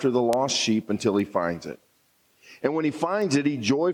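Three bit error spikes turn up, at 0.33, 1.20 and 3.22 s: a flipped bit sends a sample jumping by a power of two and straight back. The first is loudest, about -8 dBFS and likely three samples long; the later two reach about -20 dBFS, each a single sharp tick.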